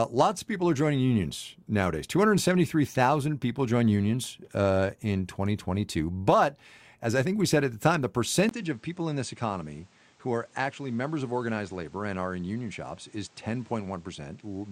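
Right after "at the time the", at about 8.49 s, there's a 20 ms gap and then the speech changes character through to the end. It goes a few dB quieter, loses everything above 9.3 kHz so it turns duller, and picks up new background noise sitting roughly 30 dB under the signal. That whole package points to an input switched to a poorer device, likely a second microphone with its own bandwidth, gain and noise floor taking over mid-recording.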